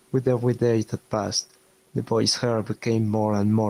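Right from the start and all the way through, the speech has gain pumping. The gain is pulled down as soon as the talker gets loud, a swing of around 5 dB. The likely cause is the input gain set way too hot for the mic, with a fast limiter or compressor clamping down on each loud syllable. Loud and quiet parts sit squashed close together in level.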